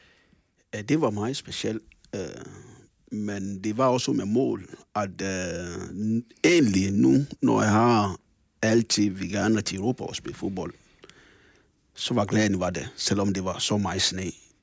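Nothing goes wrong anywhere in the clip; it just carries the usual sound of a call's microphone processing, with the lowest bass trimmed away and nothing above 8 kHz, which is exactly how that path is meant to behave.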